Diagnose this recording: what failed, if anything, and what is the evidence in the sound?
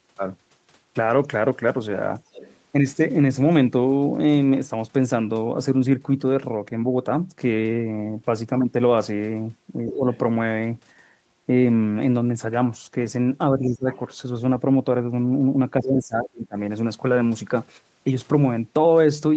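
The echo canceller in the call processing gates the room background from 2.21 to 2.34 s. The background ducks by about 13 dB for roughly 150 ms while the far end plays, then comes back once the canceller lets go of the microphone.

There's other-side voice leaking through at 2.34 to 2.57, 10.13 to 10.18, 13.92 to 13.99 and 16.25 to 16.30 s. These are faint scraps sitting roughly 20 to 30 dB under the talker, likely loudspeaker echo the canceller didn't fully subtract from the mic.

The talker's own speech is suppressed in double talk at 9.84 to 10.07, 13.53 to 13.89 and 15.78 to 16.56 s. It dips roughly 15 to 20 dB for a fifth of a second up to most of a second, likely because the canceller couldn't separate the talker from the echo and turned both down.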